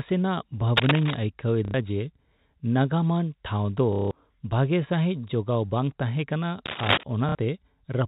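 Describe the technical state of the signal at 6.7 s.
Cable scratch noise runs from 6.66 to 7.04 s: dense, uneven crackling about as loud as the speech, likely from a worn contact whose resistance fluctuated.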